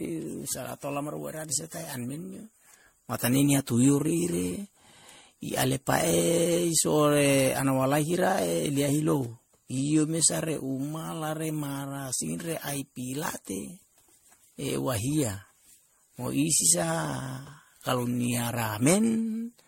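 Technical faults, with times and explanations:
Throughout, generation loss: the speech sounds swirly, smeared and hollow, with blurred consonant attacks, likely from around ten passes of MP3 re-encoding at what fits 64 kbit/s. A spectrogram shows nothing above 16.5 kHz and patchy holes across the bands.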